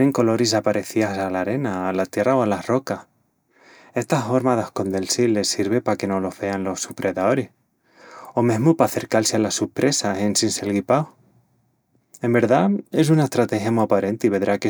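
No technical fault can be heard anywhere in the speech. There are no events to locate in time and nothing to trace back to a cause.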